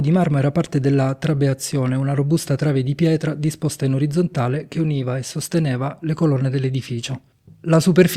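No technical faults can be heard anywhere in it.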